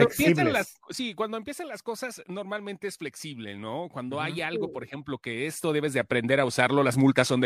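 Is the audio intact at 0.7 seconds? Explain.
Yes, the speech is intact at 0.7 seconds, with no audible fault at that moment.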